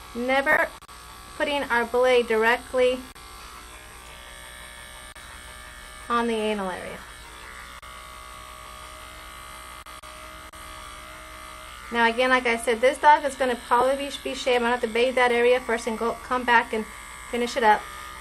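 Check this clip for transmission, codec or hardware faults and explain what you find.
Two short dropouts from lost LE Audio frames, at 0.52–0.57 s (50 ms) and 13.81 s. The decoder repeats the last spectrum with scrambled signs, so the sound briefly becomes a noisy smear.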